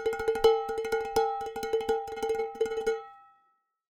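At 1.94 s the sound suddenly speeds up to about 1.51 times its pace and stays that way to the end, with pitch unchanged, so it comes across rushed. That's a time-stretched section, likely software squeezing the audio by dropping short slices.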